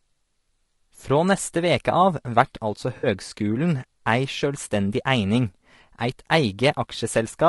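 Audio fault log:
throughout, low-delay AAC compression: The sound is plainly rough and grainy, with a hiss-like texture filling the gaps between pitch harmonics and a top band that sounds thin and synthetic. The likely cause is a low-delay AAC coder such as AAC-ELD at a bitrate around 32 kbps, whose coarse quantization at this low bitrate lets noise fill between the harmonics. On a spectrogram the harmonic stripes look blurred, with speckled noise between them and a smeared, patchy upper band.
2.97 to 3.07 s, AAC frame loss with concealment: About 60 ms of audio drops out and is replaced by a smeared, noisy or phasey patch, which fits three lost frames. The decoder repeated the last good spectrum with altered detail instead of going silent, so the stretch has the wrong texture. On a spectrogram the harmonic structure blurs into a flat, smeared block. On the waveform the stretch loses its fine shape.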